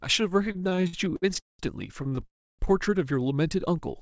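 From 0.52 to 1.62 s the speech hits repeated stalls, a stutter of twelve short holds where packets arrived late and the jitter buffer kept running dry. The receiver stretched the last sound to cover about 470 ms, the longest hold 200 ms, so it drags without losing anything. A shorter stutter follows from 2.03 to 2.25 s, four holds of 30 ms at most.

Right after, from 2.26 to 2.62 s, there's a call audio freeze: a brief fading continuation, then roughly 290 ms of silence before the speech resumes where it stopped, all of it band-limited below 8 kHz like the rest of the call. That's likely a single long packet delay emptying the buffer.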